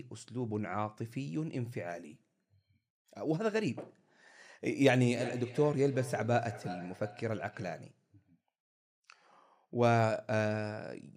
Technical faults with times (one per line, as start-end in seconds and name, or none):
4.99-7.96 feedback echo between two devices